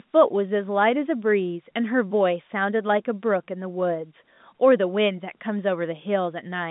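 Nothing goes wrong anywhere in this speech; it's simply ordinary G.711 A-law telephone audio at 64 kbps, with the line band running from about 150 Hz up to 3.7 kHz and nothing above 3.8 kHz, just as a normal phone call would have.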